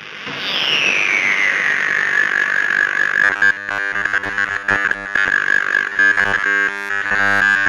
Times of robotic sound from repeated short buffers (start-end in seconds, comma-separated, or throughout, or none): 3.24-5.31, 5.89-7.69